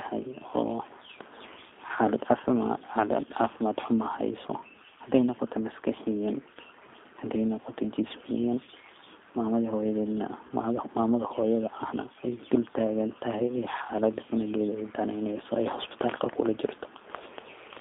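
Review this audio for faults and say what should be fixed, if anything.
G.729 codec damage runs throughout: the speech is band-limited to about 250 Hz to 3.6 kHz and sounds rough and synthetic from pulse-based excitation. Use a wideband codec or higher-bitrate link.

VoIP packet loss concealed by the speech codec occurs at 1.95–1.98 s, 8.64–8.69 s and 10.47–10.51 s. The decoder extrapolates pitch and filter, giving brief buzzy or noisy, fading patches consistent with one, three and two lost 10 ms frames. Add jitter buffering, forward error correction or redundancy.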